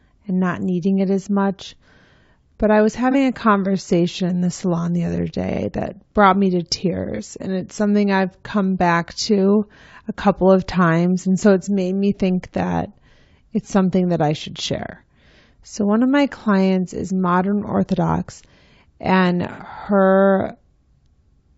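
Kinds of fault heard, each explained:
Low-delay AAC compression, throughout: the speech sounds rough and grainy, with noise filling the gaps between harmonics and a thin, synthetic top band. This likely comes from AAC-ELD at about 32 kbps, whose short frames resolve pitch harmonics poorly and spend bits quickly.
AAC frame loss with concealment, at 3.11 s after "I was", 7.15 s after "that brought me to", and 19.52 s: brief smeared, noisy patches where the decoder rebuilt missing audio from the last good spectrum. The first two fit a single 30 ms gap, and the last fits about 60 ms.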